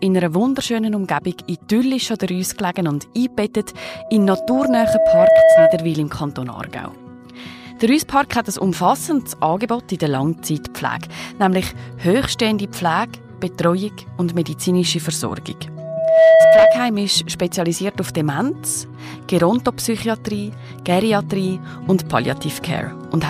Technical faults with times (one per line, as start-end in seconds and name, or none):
3.76-5.95 loudspeaker feedback squeal
15.77-16.92 loudspeaker feedback squeal